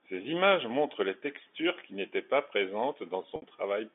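Packet loss with pitch repetition at 3.36–3.42 s: 60 ms of speech is lost, bridged by looping the last pitch period, heard as a brief buzzy hold.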